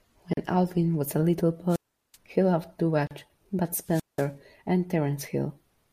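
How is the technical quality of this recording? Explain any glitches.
The recording has two kinds of glitch, each heard twice.

At 0.33 s and 3.07 s, gaps at a join of encoded pieces cut the speech for about 39 and 36 ms. Untrimmed encoder padding leaves short silences with smeared edges.

From 1.68 to 2.17 s and 3.82 to 4.31 s come wireless microphone squelch dropouts. The radio signal fades, hiss rises, then squelch mutes the output for 383 and 186 ms.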